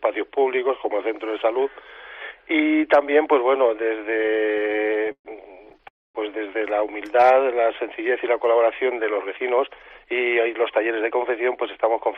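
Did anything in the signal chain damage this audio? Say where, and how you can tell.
Yes. The damage happened on the network, at the receiver's jitter buffer.

The first fault is repeated stalls, a stutter. From 4.13 to 5.27 s the sound halts 24 times. The receiver fills about 351 ms by stretching the last sound, which is roughly 31% of that span. The longest hold is 131 ms. A second burst follows from 5.65 to 5.86 s, with five short gaps totalling 51 ms. Packets arrived late and the buffer kept running dry. Nothing is lost, but the flow drags.

The second fault is a call audio freeze from 5.88 to 6.17 s. The last sound is held and fades, then about 240 ms of silence follows. In total 268 ms is inserted. The sound then resumes exactly where it stopped, and the overall delay grows by the same 268 ms. The likely cause is a held-up burst of packets that emptied the buffer completely.

The third fault is a jitter buffer speed-up from 9.11 to 11.43 s. 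The sound runs at about 108% speed with unchanged pitch, so it feels hurried. The receiver trims many tiny pitch-period slices to drain the excess audio held in the buffer. Altogether about a fifth of a second is cut.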